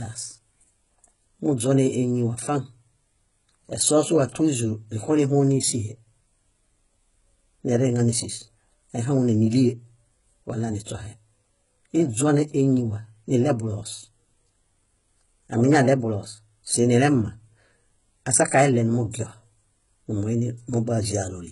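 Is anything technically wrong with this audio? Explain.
Yes. HE-AAC compression runs throughout the speech, likely the cause. The treble is rebuilt from copied lower bands, nothing exists above 11.1 kHz, and s sounds come out gritty and metallic, which fits a bitrate near 12 kbps.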